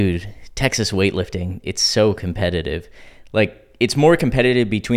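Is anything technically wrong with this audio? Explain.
Yes. Dropped samples at 4.14 s likely cause one sharp click in the speech: about a single sample is missing, so the waveform jumps to a later value.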